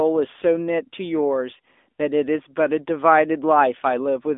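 From start to finish the speech runs through an AMR narrowband mobile codec. Nothing gets past about 3.7 kHz, the band sits roughly 250 Hz to 3.6 kHz, and the vocal-tract model adds a plainly buzzy, synthetic edge that fits a mid-rate mode near 10 kbps.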